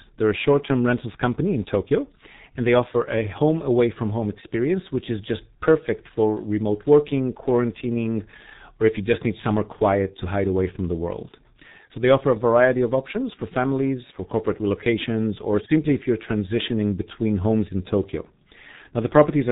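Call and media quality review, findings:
G.723.1 codec, whole clip, 0 to 19.5 s. Muffled, hoarse speech with smeared consonants; nothing above 3.8 kHz. Heavy damage fits the 6.3 kbit/s mode. The coarse 30 ms frames update the voice model slowly, so transients blur. Unlike a plain low-pass filter, which only dulls the sound, this adds a rough, buzzy texture to voiced sounds.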